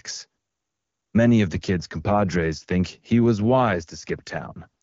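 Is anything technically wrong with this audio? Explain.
Yes. There is an AMR rate drop from 1.53 s to 4.82 s. The wideband AMR link, which up to that point sounds clean, appears to be pushed down by the network to a much lower coding rate. The roughness fits a fall from about 23.85 to 8.85 kbit/s, with the freed bits spent on error protection. The bandwidth stays the same and nothing drops out, but from 1.53 s the speech turns rougher and more synthetic through to the end.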